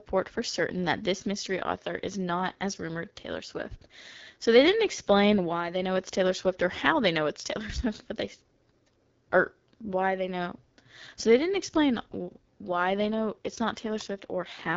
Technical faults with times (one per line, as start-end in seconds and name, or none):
0.00-14.76 AMR wideband (HD Voice) codec